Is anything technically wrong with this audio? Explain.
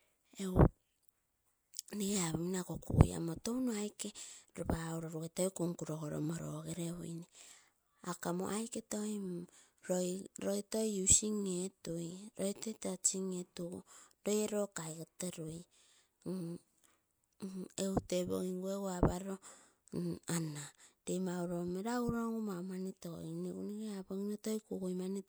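No, nothing technically wrong can be heard in this speech recording. There is no fault in it that calls for an explanation.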